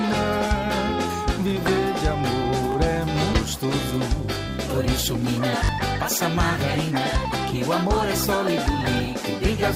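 The audio has four repeated-buffer faults and one skip ahead. Repeated buffers occur at 1.48, 2.72 and 4.35 s, each a 20 ms piece played one extra time. At 5.65 to 5.69 s the same piece plays two extra times. Fresh audio arrived late, so the last buffer was reused. Each repeat ends at a hard join and sounds like a brief click or buzz. At 3.33 s there is a skip ahead. Roughly a second of audio is missing. Later audio was already waiting when that stretch was dropped, so playback jumps forward. The two sides meet with no gap filled.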